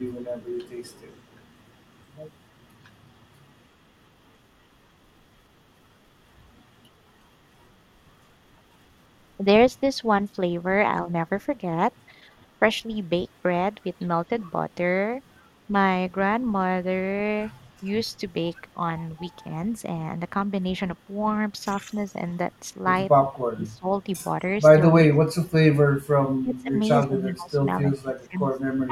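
From 0.28 to 1.21 s there is an echo leak: a loudspeaker-side echo canceller likely let residue through, so a very faint copy of the speech trails about 243 ms behind.

At 18.07 to 18.11 s, a Bluetooth stutter: roughly 21 ms of audio went missing, pointing to one lost frame, and the replayed slice gives a brief hiccup before speech resumes further on.

Late in the clip, at 23.46 to 23.86, 25.07 to 25.63, 25.89 to 26.74, 27.05 to 27.61, 27.91 to 28.40 and from 28.87 s to the end, speech is suppressed in double talk. Overlapping talk likely confused the canceller, and the voice dips by roughly 15 to 30 dB in short chunks.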